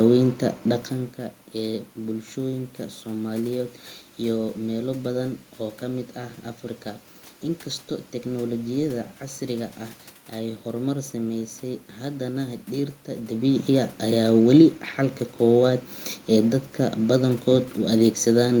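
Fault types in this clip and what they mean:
No technical fault is present in this speech recording; the steady background noise belongs to the room, and the level shifts near 1 s and 13 s come from the talker moving relative to the microphone, not from the system.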